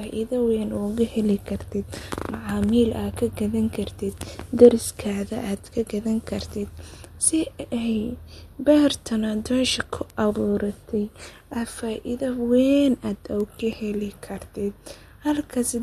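A speech clip with two isolated bit error spikes, one at 10.10 s and one at 13.40 s. Each is a single sample that jumps by a power of two and snaps straight back, so you hear a sharp broadband tick that has nothing to do with the voice, most plausibly a flipped bit in memory or on a digital link.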